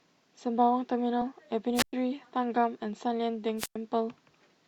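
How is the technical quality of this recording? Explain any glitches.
The recording has three glitches, one from lost compressed audio and two from a wireless microphone link.

Compressed frames skipped at 1.21 s. Around two frames of the compressed stream never reached the output, so the speech jumps ahead by roughly 40 ms, which fits 20 ms frames.

Wireless microphone squelch dropouts at 1.74 to 1.93 s and 3.57 to 3.76 s. The FM radio signal faded far enough that the receiver's squelch shut the output off. Each event is a brief swell of hiss, then near silence lasting about 110 ms and about 100 ms, before the speech returns.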